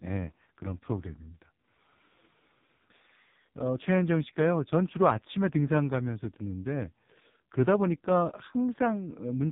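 Speech passed through the AMR narrowband mobile codec for its whole length, with heavy damage. The band stops at about 3.8 kHz, so fricatives and sibilants lose their edge and the voice sounds boxed-in and telephone-like. Each 20 ms frame models the vocal tract and drives it with only a few pulses, which leaves the voice buzzy and synthetic. That degree of coarseness points to one of the lowest AMR-NB modes, around 5 kbps.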